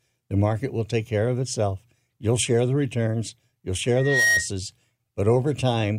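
At 3.96 s, just after "share the returns you'll", loudspeaker feedback squeal breaks in. The microphone is picking up the loudspeaker it feeds. Around 1.9 kHz the loop gain rises above one, so that tone keeps feeding itself. It swells over roughly a third of a second into a piercing whistle. At its peak it sits a few decibels above the speech. The squeal stops at 4.48 s.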